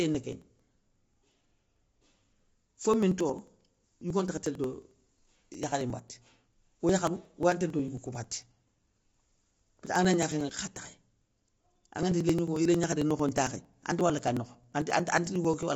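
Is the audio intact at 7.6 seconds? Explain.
No. At 7.6 seconds the audio falls inside a run of periodic USB or driver dropouts that lasts from 0.15 to 15.63 s. Something on the system stalls the USB bus or the audio driver at a fixed interval, and each stall throws away roughly 10 ms of audio, which is skipped rather than filled with silence. The stalls come every 0.09 s, about 150 of them in all, so the speech carries a steady stream of ticks that sound only while there is signal.

Over the whole clip, including this moment, there is also damage from low-delay AAC compression, likely AAC-ELD at a low bitrate in the region of 24 kbps. That codec works in short frames, which resolve pitch harmonics poorly, and at a tight bitrate it quantizes so coarsely that noise spreads into the gaps between them. The speech therefore sounds plainly rough and grainy, with noise between the harmonics, and nothing comes through above 7.7 kHz.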